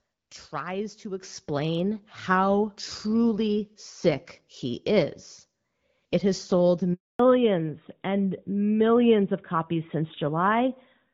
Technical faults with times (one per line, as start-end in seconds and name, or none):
1.23 microphone volume stepped up
2.25 microphone volume stepped up
6.93-7.19 handover gap
7.19-11.13 fallback to narrowband